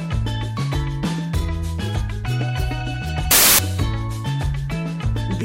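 Samples built from the wrong bytes appear from 3.31 to 3.59 s, where the audio turns into a burst of loud, harsh broadband noise. The reader assembled each sample's bytes wrongly, so the rapidly fluctuating low-order bits landed in the most significant positions and swamped the real signal.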